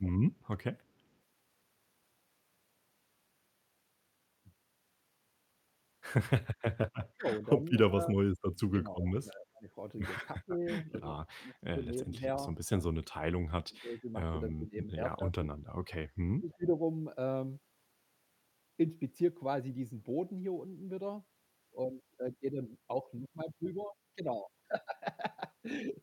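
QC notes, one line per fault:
0.02–0.07 s and 9.08–9.12 s: echo leak. Brief, faint scraps of the voice return about 309 ms late, sitting roughly 25 dB under the direct speech. The likely cause is a far-end loudspeaker echo that the echo canceller failed to fully remove and sent back.
7.15–9.69 s, 10.36–12.24 s, 12.66–12.70 s, 13.17–15.41 s, 16.39–16.75 s: speech suppressed in double talk. The voice dips, thins or drops out in pieces, by up to about 35 dB in the first span and about 20–25 dB later. This likely happens because the echo canceller attenuated the talker while both sides were speaking at once.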